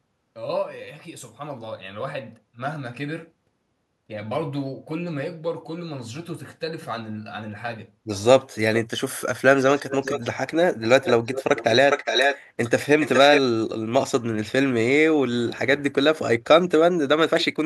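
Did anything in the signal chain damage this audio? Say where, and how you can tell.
Yes: call processing, likely a leaky echo canceller. Echo leak repeats the speech about 0.41 s late at 9.56, 10.84, 11.32, 12.61 and 13.0 s.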